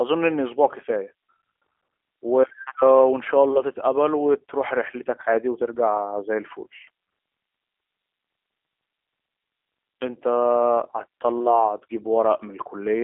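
From start to finish, the speech carries the sound of the G.729 codec, most likely the G.729A variant at a rate consistent with 8 kbit/s. The line is band-limited to roughly 300 Hz to 3.4 kHz, with nothing at all above 3.7 kHz, so sibilants sound dull and the low end is thin. Because the codec resynthesises each 10 ms frame from a vocal tract filter, a pitch predictor and a few coded pulses, the damage is plainly audible as a rough, buzzy, synthetic texture.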